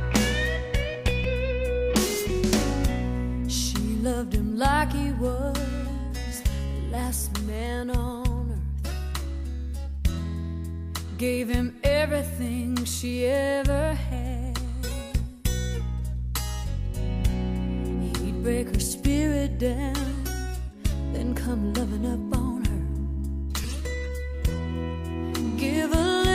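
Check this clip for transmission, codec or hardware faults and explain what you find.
Two brief glitches turn up, both repeated buffers, one at about 1.24 s and one at about 23.64 s. In each case the next chunk of audio didn't reach the device in time, so it replayed the chunk it already had, once, and a few milliseconds of sound went missing. The repeated piece is tiny, which fits a buffer of about 5 ms, so you don't hear a stutter. You hear a quick click or a brief buzz at the hard joins.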